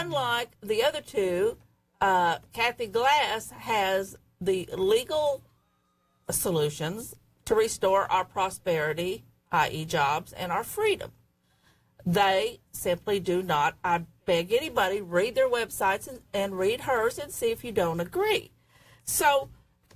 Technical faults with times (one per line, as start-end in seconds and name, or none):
none